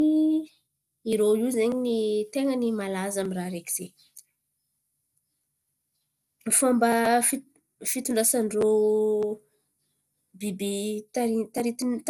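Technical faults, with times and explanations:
Throughout: generation loss. The speech sounds swirly, smeared and hollow, with softened consonant attacks and nothing above 18.1 kHz, most likely from about five successive MP2 encodes near 96 kbit/s, each requantising on a shifted frame grid so noise and spectral gaps accumulate.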